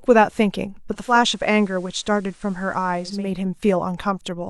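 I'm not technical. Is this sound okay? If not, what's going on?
No. From 0.87 to 3.38 s this speech shows digital radio blending to analogue: the radio lost its digital signal and faded over about 0.4 s to the FM version, which adds faint hiss and drops slightly in volume. Unlike a plain dropout, the sound never stops; it smoothly switches quality, then switches back.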